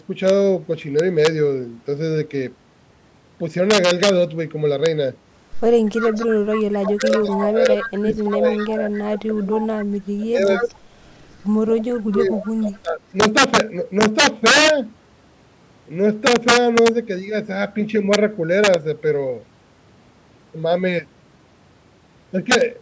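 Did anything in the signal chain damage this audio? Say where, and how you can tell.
Yes. Integer overflow runs through the whole clip at the sample-format conversion stage. Loud peaks, driven about 4 dB over the limit, wrap to the opposite sign and give sharp cracks, harsher than clipping.

An echo leak from call processing returns the audio delayed by 242 ms at 5.94–6.61, 7.16–8.97, 9.56–9.86, 10.55–11.42 and 12.11–12.79 s, likely residue the far-end echo canceller missed.

Speech is suppressed in double talk at 6.6–10.63 and 11.68–13.04 s, dipping by up to about 25 dB. The likely cause is the echo canceller ducking the talker while both sides speak.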